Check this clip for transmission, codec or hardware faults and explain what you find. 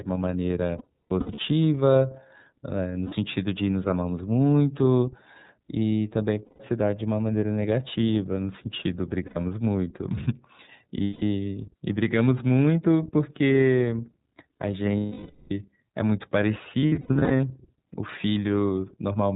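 Two faults are present: the speech has passed through the iLBC codec for its whole length, and it was hit by lost iLBC frames seven times.

The iLBC codec coded each frame's excitation on its own, and the band stops at 4 kHz; it ran with 30 ms frames at about 13 kbps. The codec damage is plainly audible: dull, narrowband speech with a rough, slightly synthetic edge.

The lost iLBC frames fall at 0.78–1.39 s, 3.06–3.13 s, 6.45–6.61 s, 9.26–9.37 s, 11.04–11.23 s, 14.97–15.51 s and 16.80–17.40 s. The first and last are scattered losses, with the longest runs around 0.2 s and 0.1 s. At each one the decoder repeated the last pitch cycle mixed with noise, so the gap holds a buzzy, breathy vowel that fades in the longer losses. The voice is right again almost immediately after each one.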